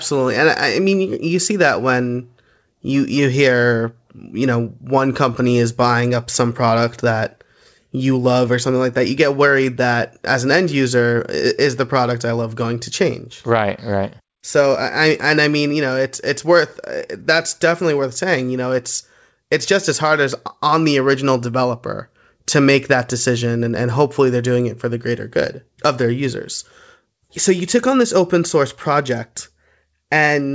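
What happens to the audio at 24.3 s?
Nothing goes wrong at 24.3 s: the speech carries on intact through the call path, whose band-limited sound, with nothing above 8 kHz, fits a G.722 codec working as it should.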